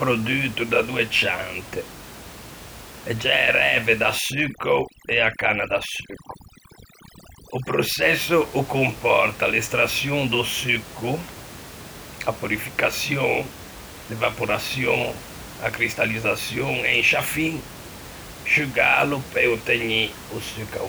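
From 4.18 to 8.02 s, overdone noise removal strips the room noise and quiet speech detail together. The background twinkles.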